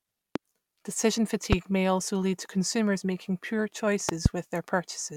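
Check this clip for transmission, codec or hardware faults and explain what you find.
Three loud pops sit on top of the speech, at 0.36 to 0.38 s, 1.53 to 1.55 s, and a double pop at 4.09 to 4.28 s, peaking about 15 to 20 dB above the signal. Each is likely a voltage pulse from a plug, switch or static, heard as a sharp thump while the speech continues. They show as tall waveform spikes and full-height vertical spectrogram lines.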